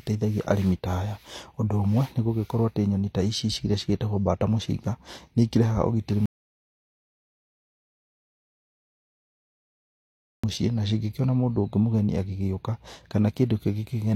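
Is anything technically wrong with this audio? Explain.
Yes. From 6.26 to 10.44 s the speech cuts off mid-flow into dead digital silence, with no room tone left, and 4.18 s of material is gone. This is an audio dropout to silence, likely from the input being lost while the recorder kept writing zeros.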